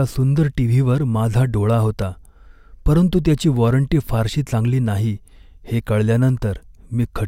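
A block of digital silence at 2.02 s, just after "माझा डोळा", lasts about 0.41 ms: a short run of samples was replaced by zeros, likely when the output buffer went unfilled. The abrupt drop to zero and back makes a single tick.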